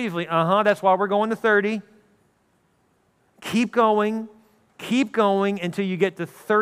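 No technical faults are audible.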